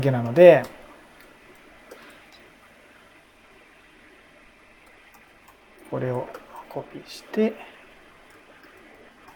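No technical faults can be heard anywhere in the recording; the signal stays steady and intact throughout.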